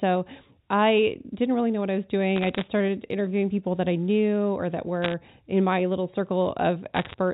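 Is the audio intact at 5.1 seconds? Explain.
No, bit errors on the digital phone line hit from 5.02 to 5.13 s. Around one bit in a hundred flips, corrupting single samples into sharp ticks and crackle.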